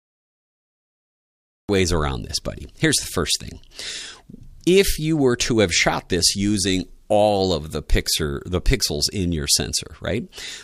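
The recording or stream began late, a cut-off start: the audio is silent from 0 to 1.69 s, then enters abruptly in the middle of a sound at 1.69 s, with no natural attack or fade-in, as though capture caught it already under way.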